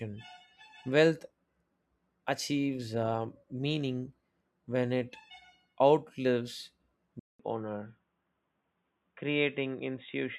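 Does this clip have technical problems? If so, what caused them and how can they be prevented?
Yes: at 7.19 s there's a 200 ms gap, then the speech turns dull and boxy with nothing above 3.8 kHz, a bit quieter and with a faint new hiss. That's likely the input switched to a poorer device, maybe a headset's call profile. To prevent it, pin the input device in the recording settings and turn off automatic switching.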